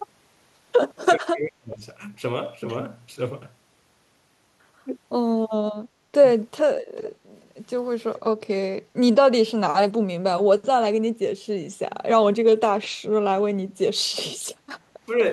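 From 1.17 to 1.82 s the speech sinks sharply, by roughly 40 dB at its deepest. This is speech suppressed in double talk, likely an echo canceller muting its own talker while the far side spoke. Unlike a network dropout, it dips and recovers with the overlap.

At 6.96 to 7.09 s and again at 8.16 to 8.20 s, faint scraps of the voice return about 441 ms late, around 25 dB below the speech. This is echo leak, likely residual loudspeaker pickup that the canceller missed. The fixed delay sets it apart from room reverberation.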